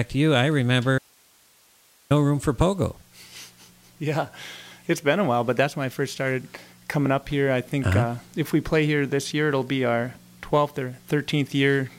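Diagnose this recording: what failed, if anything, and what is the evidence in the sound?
An audio dropout to a faint residue runs from 0.98 s to 2.10 s, about 1.12 s of lost signal. The sound stops abruptly mid-flow and returns just as suddenly. The gap is not silent: it holds hiss roughly 35 dB below the normal level, so everything downstream of the break stayed live and kept passing its own noise floor. The stage is likely the analogue wiring, with an intermittent connection ahead of the input.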